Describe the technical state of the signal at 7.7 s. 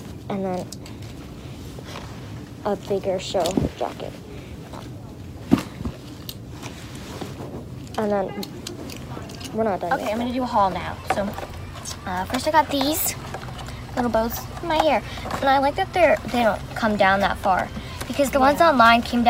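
At 7.7 s the signal is intact, with no dropout, clipping, distortion, noise burst or other technical fault audible at that moment.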